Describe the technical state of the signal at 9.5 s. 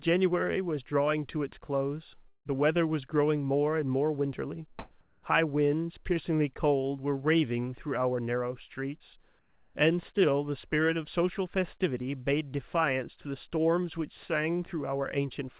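At 9.5 s the real background drops out from 9.39 to 9.75 s, replaced by steady, featureless hiss at the same level: likely comfort noise filling a transmission pause.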